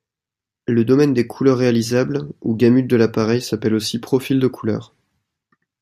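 No technical faults are audible.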